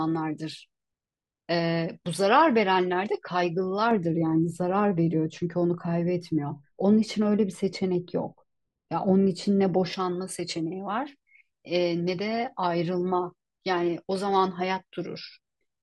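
From 3.91 s to 9.93 s, the speech turns dull and muffled. This is de-emphasis applied wrongly. A treble cut meant to reverse pre-emphasis has landed on audio that never had that boost, or has been applied a second time. The response falls away smoothly as frequency rises. At 10 kHz it sits about 11 dB below the level at 1 kHz. Consonants lose their edge, and the air above the voice is reduced.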